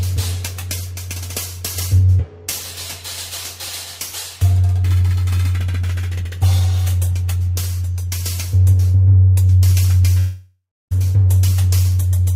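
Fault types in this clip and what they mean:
Long network dropout: from 10.19 to 10.93 s the sound breaks off, the last moment is stretched into a fading buzz or hiss, and about 0.31 s of that stretch is silence before the audio returns. It likely comes from network audio failing to arrive for about 0.72 s. Unlike a brief packet-loss glitch, it lasts long enough to decay into silence, and the audio resumes further on with that portion skipped, not delayed.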